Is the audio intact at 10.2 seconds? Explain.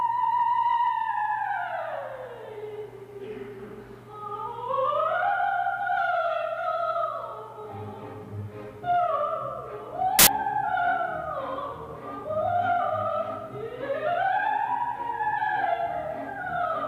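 No, at 10.19 to 10.27 s there's a short burst of samples built from the wrong bytes: misassembled bytes turn low-order bits into loud, harsh broadband noise.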